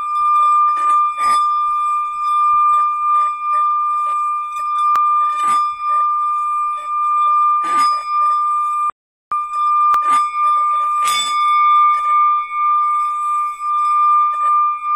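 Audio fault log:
4.96 s and 9.94 s: audio missing between chunks. Two tiny skips, each dropping something like 15 ms, with the sound butted straight together across the gap. They're spaced 5 s apart, so this is likely the recorder losing a sliver each time it swaps to a fresh 5-second chunk.
8.90–9.32 s: playback stall. The sound just cuts out mid-flow for about 417 ms and then picks up again. That kind of dead gap is likely the player running dry on data or having its thread held up until it could recover.
9.32–10.12 s: time-compressed catch-up. Right after the stall the audio rushes along at 1.5x speed but keeps its normal pitch. That's the player trimming and cross-fading small slices to burn off the backlog it built up.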